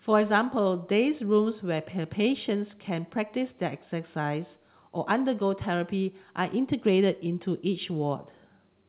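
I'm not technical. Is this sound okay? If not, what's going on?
Yes, nothing in this speech recording stood out as a problem when I listened to it.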